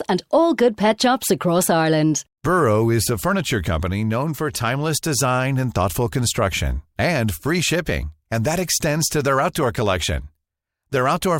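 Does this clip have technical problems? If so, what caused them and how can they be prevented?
No, there are no technical problems in this clip.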